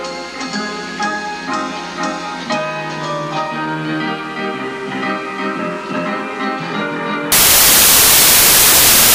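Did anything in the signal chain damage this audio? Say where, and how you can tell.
Yes. The damage sits at the sample-format conversion stage. From 7.32 s to the end at 9.14 s, the sound gives way to loud, harsh broadband noise. These are samples built from the wrong bytes. The reader assembles each sample with its bytes misaligned or swapped. The rapidly changing low-order bits end up carrying most of each value. That turns the signal into broadband hiss.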